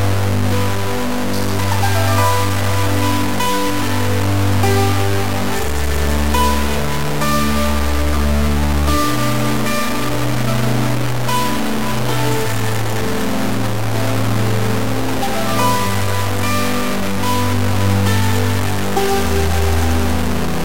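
Low bit depth without dither runs from start to finish. The error tracks the sound, so quiet passages turn grainy, or dense passages sit under near-steady hiss. The distortion is nearly as loud as the sound itself. The likely cause is truncation to 3 bits.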